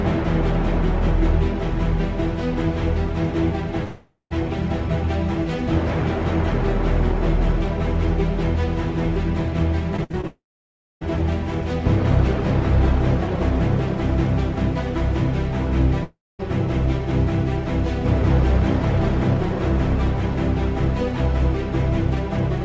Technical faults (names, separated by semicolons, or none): long network dropout; repeated packet loss (robotic sound)